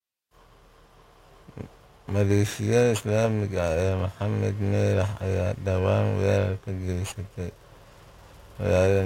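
Periodic clock jitter throughout: interference wobbles the converter clock at around 2 kHz, adding sidebands that give the speech a rough, metallic edge, strongest on high frequencies.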